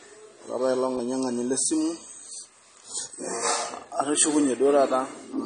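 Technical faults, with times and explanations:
Throughout, AAC compression: the speech sounds dull and smeared, with nothing above 9.7 kHz. This likely comes from low-bitrate AAC-LC, around 32 kbps.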